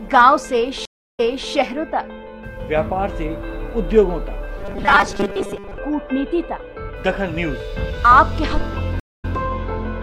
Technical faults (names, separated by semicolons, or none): stream reconnect; robotic sound from repeated short buffers